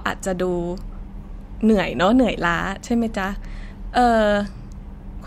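No technical faults can be heard anywhere in this speech recording.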